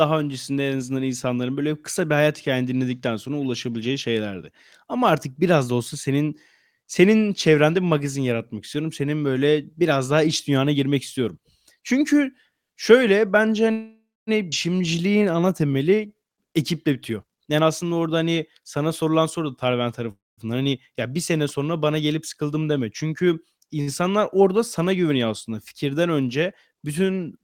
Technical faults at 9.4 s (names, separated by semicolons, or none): none